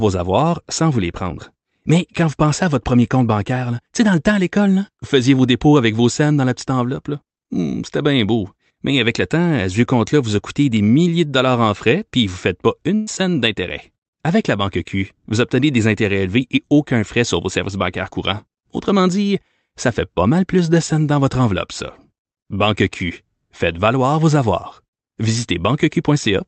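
A burst of packet loss hits the speech from 12.95 to 13.09 s. About 120 ms of audio never arrived in time, so the receiver stretched the last sound it had across roughly 116 ms while fading it down, and the speech then resumes with that stretch missing.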